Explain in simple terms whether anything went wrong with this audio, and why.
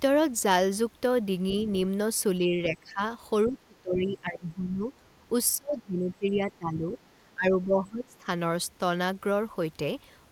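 Two things go wrong here. First, around 1.51 to 1.56 s there's a very brief, faint scrap of another voice: the other side's voice leaking through. The talker's device was playing the far end out loud, and the echo canceller most likely didn't scrub all of it from the microphone, so a quiet snippet slipped into the recording.

The bigger problem is speech suppressed in double talk. The talker's voice sinks well down at 2.39 to 3.01 s, 3.45 to 4.9 s, 5.56 to 6.99 s and 7.34 to 8.27 s. The first dip is milder, and the later three go noticeably deeper and last longer. The cause is most likely that both people were talking at once, and the echo canceller couldn't tell the talker apart from the echo, so it turned everything down together.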